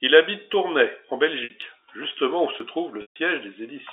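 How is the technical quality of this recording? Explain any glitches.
The recording has two kinds of glitch: three short jumps and two gaps patched with repeated sound. It runs through G.711 telephone coding, so the audio is limited to the phone band of about 300 Hz to 3.7 kHz.

At 0.53 s, 1.62 s and 2.60 s there are sudden jumps forward. The second comes just before "justement où". The third comes just after "justement où". Each is likely a dropped buffer (overrun). The recording software was too slow to collect a block of samples, and the hardware overwrote it. Roughly 20 ms of audio vanishes each time. The two sides are joined directly, with no silence between them. That produces the skip.

From 1.44 s to 1.50 s, just before "justement où", there is packet loss with pitch repetition. About 60 ms went missing, which fits three 20 ms packets. The receiver filled the hole by repeating the last pitch cycle. 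This gap is short, so it sounds like a brief held, buzzy tone. From 3.02 s to 3.16 s a longer gap of 140 ms is patched the same way. There the repeated cycle fades toward silence, and the speech returns with a quick cross-fade.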